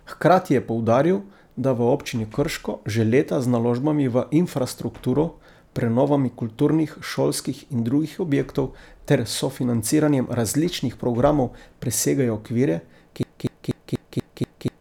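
Broken-record loop from 13.23 s to the end: a 0.24 s fragment repeats seven times back to back, likely a stalled stream resending it.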